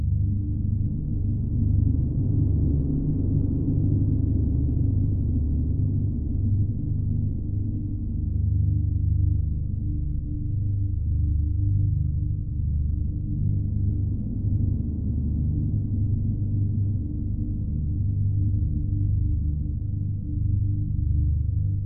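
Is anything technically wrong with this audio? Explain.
Yes. Throughout, this is stereo read as mono: alternating left and right samples are played in sequence as one channel, so the sound runs at half speed, an octave low. A faint mirrored image in the upper spectrum sets it apart from a simple sample-rate mismatch.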